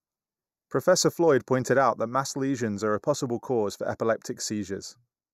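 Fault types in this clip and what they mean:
Channel delay (comb filtering): one channel lags the other by a fraction of a millisecond before mono summing, cutting a first notch near 3 kHz that hollows the speech throughout.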